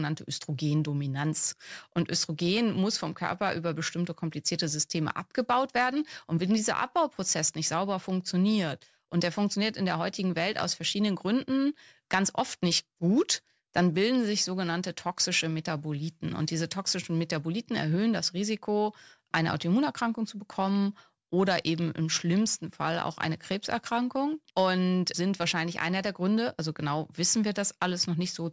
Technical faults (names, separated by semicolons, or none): none